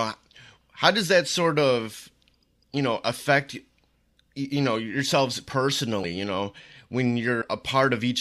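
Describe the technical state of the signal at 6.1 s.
Compressed frames skipped at 6.03 to 6.06 s: whole frames of the coded speech were never decoded, so the audio jumps ahead by roughly 70 ms, which fits about three 20 ms frames. Because neighbouring frames overlap, the join is a brief smeared blip, not a hard click.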